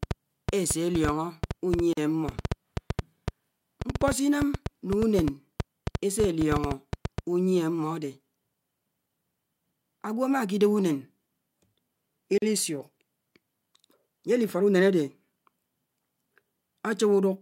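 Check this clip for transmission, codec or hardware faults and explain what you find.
Two kinds of fault are present: a train of clicks at the start and two short dropouts from gaps at joins of encoded pieces.

From 0.03 to 7.19 s, irregular ticking and popping runs over the speech and through its pauses, about 6.2 clicks per second, roughly fifty in all, peaking around 10 dB above the speech. This train of clicks is likely interference from nearby equipment or a faulty connection or power supply.

At 1.93 s and again at 12.38 s, the speech drops out in a gap of about 42 ms, with smeared edges, then resumes where it stopped. These are gaps at joins of encoded pieces, where separately encoded segments were spliced without trimming each run's start-up delay and final-frame padding.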